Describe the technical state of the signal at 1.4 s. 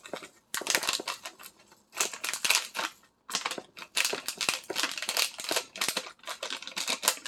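At 1.4 s the sound is intact, with no dropout, clipping, glitch or other fault audible at that moment.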